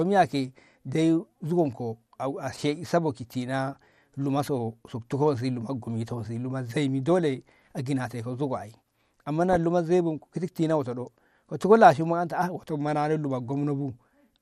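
Throughout the speech the top end is dull and the remaining bands have a gurgling, granular edge, plainly audible, most likely MP2 compression at a rate that fits about 80 kbps. Upper sub-bands switch off when bits run short, and coarse quantisation roughens what survives.

From 9.50 to 9.57 s a short burst of burbling breaks over the speech. This is DAB burbling: bit errors slipped past error correction at a rate well under one percent, corrupting what sounds like several consecutive frames so short blips of noise land in single sub-bands.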